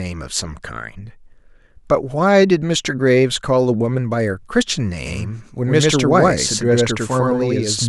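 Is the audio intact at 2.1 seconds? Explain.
Yes, the audio is intact at 2.1 seconds, with no dropout, click, distortion or other fault at that point.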